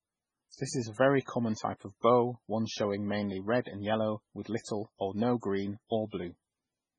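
Throughout the speech, nothing sits above 10.4 kHz, a flat spectrogram ceiling, with swirly MP3 artefacts: likely low-bitrate audio saved at a high bitrate.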